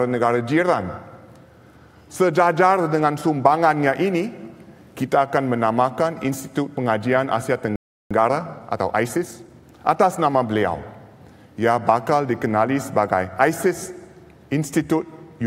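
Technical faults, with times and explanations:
7.76–8.11 s, playback stall: the audio cuts out mid-flow into silence for about 0.35 s, then resumes. The likely cause is the player running out of buffered data, or its output thread being blocked, so nothing reached the output until it recovered.
8.11–10.43 s, time-compressed catch-up: the audio sounds hurried, running about 1.15 times normal speed at unchanged pitch. The player is clearing the backlog left by the stall by cutting out short pieces and cross-fading across the joins.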